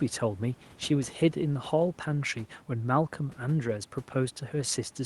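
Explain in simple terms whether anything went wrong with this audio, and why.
Nothing went wrong here: the speech came over an ordinary call connection behaving the way it should, and the faint background noise underneath comes from the room itself rather than from any problem with the audio.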